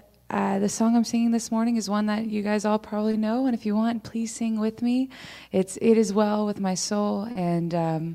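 At 3.11 s there is a short concealed packet loss: about 20 ms of audio failed to arrive in time, and the receiver patched the gap by extending the preceding sound before blending back into the real signal. It shows up as a brief smear. A second, longer one runs from 7.31 to 7.37 s, with about 40 ms synthesized, giving a wobble where the continuation stands in for the missing audio.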